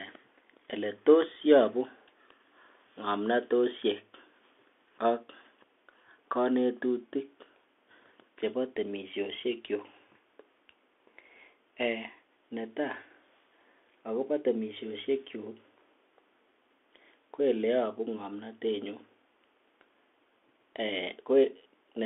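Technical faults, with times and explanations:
Throughout, Bluetooth CVSD headset codec: the speech is confined to roughly 150 Hz to 3.4 kHz, and each sample is sent as one up-or-down bit with an adapting step, so loud high sounds outrun the step and distort, s sounds turn scratchy, and granular hiss lies underneath.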